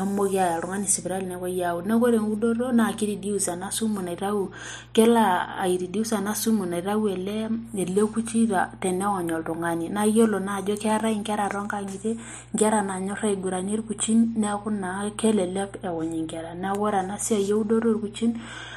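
Mains hum runs under the speech from start to finish. A steady 60 Hz tone sits roughly 25 dB below the speech. Power-line energy has leaked into the signal path.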